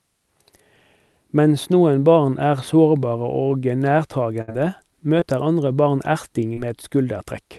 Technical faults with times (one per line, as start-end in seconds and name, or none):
4.41-4.50 burst of packet loss
5.20-5.23 short concealed packet loss
6.53-6.59 short concealed packet loss